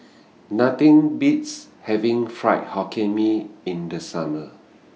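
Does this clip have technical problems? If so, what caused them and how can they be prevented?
No, nothing stood out as a technical problem on listening to this speech.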